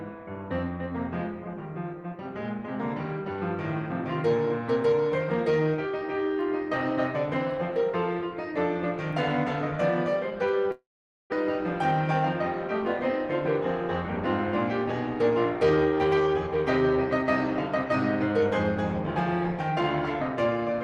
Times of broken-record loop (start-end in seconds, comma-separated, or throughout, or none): none